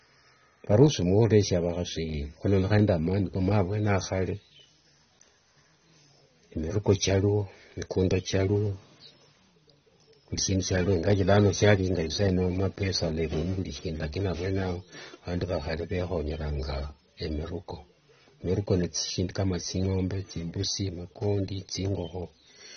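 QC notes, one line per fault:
Throughout, AAC compression: nothing reaches above 6.3 kHz, so the speech sounds dull, with plainly audible warbling and fizzy smearing on sibilants, likely from AAC-LC coding at a low bitrate near 24 kbps. A spectrogram shows a flat ceiling at 6.3 kHz.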